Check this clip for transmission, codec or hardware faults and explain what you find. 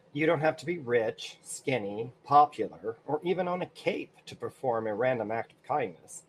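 No fault can be heard anywhere in the speech. There is nothing to place in time, explain or describe.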